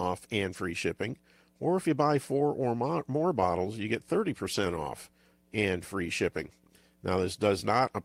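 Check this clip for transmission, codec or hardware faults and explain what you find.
Transmission faults are present, all of one kind. Lost packets rebuilt from error correction occur at 0.53–0.59 s, 2.15–2.17 s, 4.45–4.63 s and 6.43–6.49 s. The following packets carried low-bitrate backup copies, which the decoder played instead, so the speech never drops out. Those stretches sound rougher and noisier, the longest being the 100 ms one near 4.5 s.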